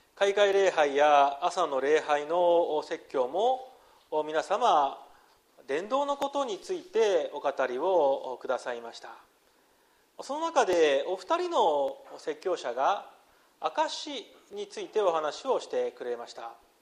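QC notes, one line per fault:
0.53 s, 6.22 s, 10.73 s, 11.88 s and 14.53 s: dropped samples. Each is a single sharp, dry click with no gap or dropout, a thin vertical line through the whole spectrum. The likely cause is a tiny run of samples, about 0.7 ms worth, missing from the stream. The waveform then leaps from one value straight to a later one, and that abrupt step is what sounds as the click. Too little is lost for any sound to go missing.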